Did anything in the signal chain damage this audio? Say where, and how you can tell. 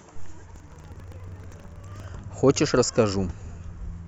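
Yes, at the driver or buffer stage. From 0.52 to 2.1 s the speech carries a steady robotic rattle at 25 Hz that is present only while there is signal. That is buffer tearing. The program writing the ring buffer and the hardware reading it have slipped and now cross inside each period, which fits a 40 ms period. A small slice of every buffer replays audio from roughly 150 ms earlier, with hard joins on both sides.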